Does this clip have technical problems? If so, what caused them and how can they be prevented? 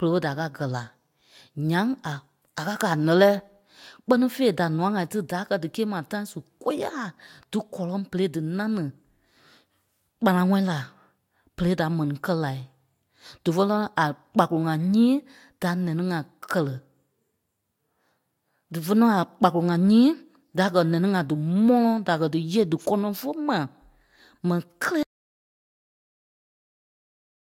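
Yes. Audio dropout to silence from 25.03 s to the end: the speech cuts off mid-flow into silence with no room tone, likely from the input being lost while recording continued. Securing cables and connections, confirming no mute is engaged, and monitoring levels during capture prevents this.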